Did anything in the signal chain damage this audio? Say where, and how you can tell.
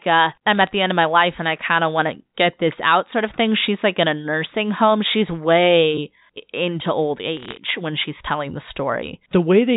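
Yes. Two short bursts of bit errors on a digital phone line point to the transmission stage. Sharp ticks and crackle sit from 0.55 to 0.69 s, just before "the end of my", and from 7.37 to 7.57 s, between "way into old" and "when she's telling the". The underlying speech is unchanged. Each flipped bit corrupts one G.711 mu-law sample. Hits on the upper bits, or on the sign of a loud sample, cause large jumps, and the error rate is a few tenths of a percent.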